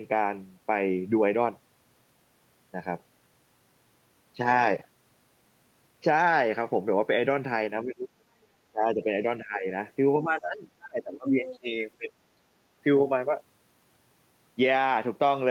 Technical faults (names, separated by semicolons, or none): speech suppressed in double talk; other side's voice leaking through